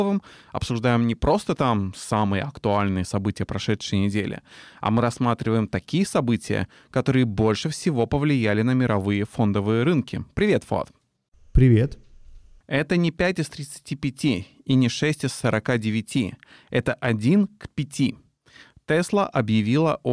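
No technical faults can be heard anywhere in the speech recording. Nothing in the audio calls for a time marker or an account of something going wrong.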